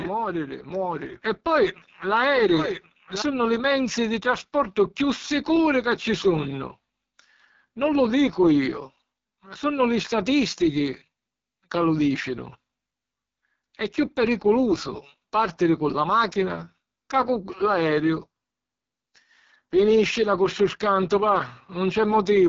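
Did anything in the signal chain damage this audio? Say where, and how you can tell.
Yes. At the codec stage, AMR wideband (HD Voice) coding roughens the speech throughout, pointing to its lowest 6.6 kbit/s mode. A spectrogram shows nothing above 7.5 kHz.

A doubled audio track, already under way at the start and ending abruptly at 3.22 s, adds a copy about a second late and a few dB quieter. This is likely from a second capture path, and its waveform shows repeated shapes with no decay.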